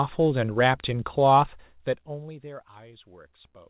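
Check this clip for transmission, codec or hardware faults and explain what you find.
No transmission, codec or hardware fault is audible: the speech has come over a narrowband call link that stops at 4 kHz, which fits G.711 mu-law at 64 kbps, and the gradual level shifts move smoothly like a fader.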